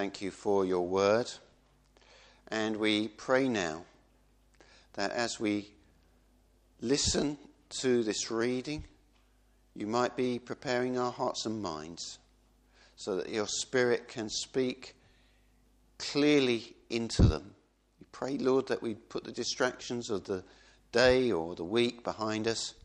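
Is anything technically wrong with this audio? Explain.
No, nothing technically wrong stands out in this audio; no faults are audible anywhere in it.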